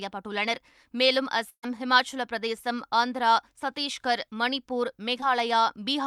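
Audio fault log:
1.49–1.65 s, burst of packet loss: the speech stretches into a held, fading continuation that drops to near silence for about 80 ms, then jumps ahead. About 140 ms of packets never arrived in time, so the receiver extended the last sound and turned it down before resuming later.
5.21–5.24 s, short concealed packet loss: a brief smear or wobble in the speech. About 20 ms of audio failed to reach the decoder, which continued the preceding sound to cover the hole and then blended back into the real signal.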